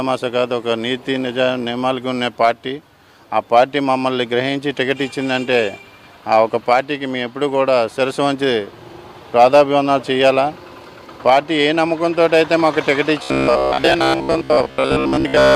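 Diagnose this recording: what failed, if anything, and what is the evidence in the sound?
From 13.23 s to 15.55 s the sound turns into a rigid, metallic buzz at about 66.8 Hz, with the underlying contour still roughly traceable. This is robotic sound from repeated short buffers, likely at the driver or buffer stage: audio arrives too slowly, so a slice of roughly 15 ms is looped in place of most of the real signal. Unlike codec warble or flanging, the buzz pitch stays locked rather than drifting or sweeping.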